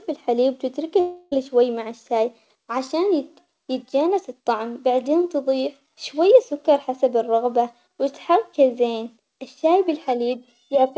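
From 1.00 to 1.34 s the sound turns into a fading buzz before resuming at "شوي مع الشاي عشان", likely a long network dropout. About 0.32 s never arrived and was concealed by stretching the last sound. On a spectrogram this shows as smeared, repeating bands that decay. The waveform shows a periodic, shrinking envelope. The band stays empty above 8 kHz, as expected from the G.722 call path.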